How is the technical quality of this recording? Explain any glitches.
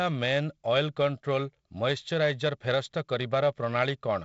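No glitches: the speech comes through G.722 wideband telephone coding with nothing above 7.7 kHz and a light layer of coding noise, which fits the 48 kbit/s mode.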